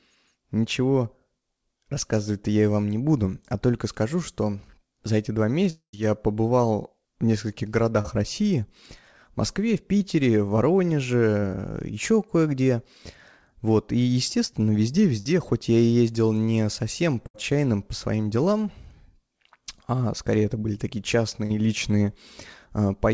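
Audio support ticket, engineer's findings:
Long network dropout, 5.70–5.95 s. Audio stops arriving. Last sound is stretched into a fading buzz/hiss, then about 0.1 s of near-silence. Resumes with roughly a quarter second missing. Likely a network outage; jitter buffer concealment ran out before packets returned.

Short concealed packet loss at 8.01–8.06 s, 9.98–10.02 s and 21.46–21.52 s. Brief smear/wobble where 20–40 ms never reached the decoder in time. Receiver extrapolated the preceding sound, then crossfaded back. Short consonants at risk of vanishing.

Burst of packet loss at 15.20–15.27 s (40 ms missing) and 17.27–17.36 s (80 ms missing). Consecutive packets lost or late. Concealment holds the last sound as a buzz or hiss, attenuating across the gap, then playback jumps ahead. On the G.722 call path the band stops at 8 kHz, which fits 64 kbps G.722.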